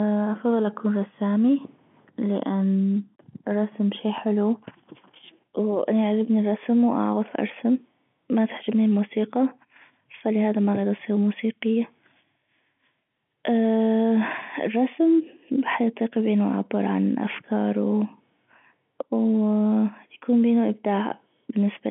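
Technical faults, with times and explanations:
No technical faults are audible anywhere in this speech.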